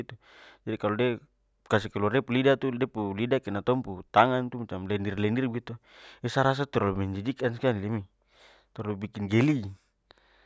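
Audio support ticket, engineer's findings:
Nothing stood out on listening through the speech recording; no fault to log against any component.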